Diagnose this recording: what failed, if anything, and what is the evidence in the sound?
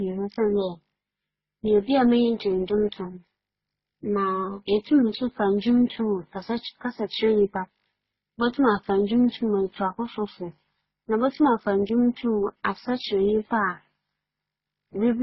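The failure is at the codec stage. Across the whole speech recording, nothing is present above 5.7 kHz, and that ceiling never moves. Several kinds of coding damage are heard together, along with a thin, band-limited tone. Together they point to transcoding between lossy codecs, likely a chain of very low-rate encodes ending in AAC-LC. Each stage spent bits re-coding the earlier artefacts and added its own. The lowest cut-off survived to the end.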